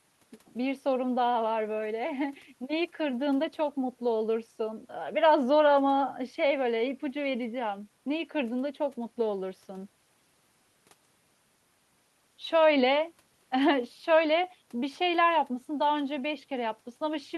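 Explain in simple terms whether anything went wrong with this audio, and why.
Nothing went wrong here; no faults can be heard.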